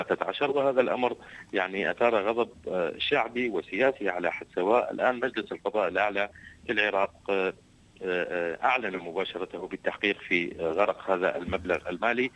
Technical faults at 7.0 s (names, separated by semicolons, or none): none